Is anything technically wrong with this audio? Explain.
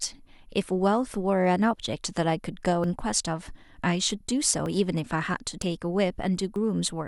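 Yes. The speech has two kinds of fault.

At 2.84, 4.66, 5.62 and 6.56 s the sound jumps forward with no gap, losing roughly 70, 20, 40 and 20 ms. This is most likely a dropped buffer (overrun): the hardware overwrote samples before the program read them, so the two sides are spliced together.

From 4.20 to 4.23 s there are repeated frames. A 26.1 ms block, which points to a single compressed frame, plays twice. That produces a brief stutter, and it lengthens the audio by 26.1 ms.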